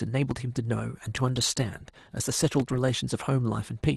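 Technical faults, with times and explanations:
0.31–0.33 s and 2.60–2.62 s, loud pop: a sudden voltage pulse, likely from static or a switch, adds a single sharp pop about 10 dB above the ongoing speech.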